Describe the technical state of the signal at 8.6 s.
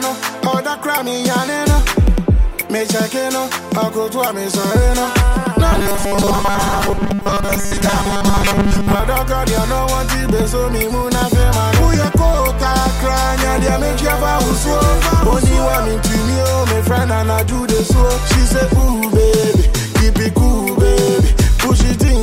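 At 8.6 s the signal is inside a stretch of robotic sound from repeated short buffers running from 5.72 to 9.00 s. A rigid, metallic buzz fixed at 200 Hz is imposed on the sound, and most of the material there is repeated rather than new. The likely cause is audio arriving too slowly, so the last 5 ms block is replayed over and over to fill each gap. Unlike a dropout, there are no silences, only a steady pitch imposed on sound that still loosely follows its original shape.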